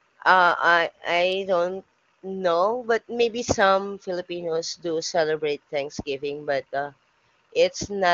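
No technical faults can be heard in this speech.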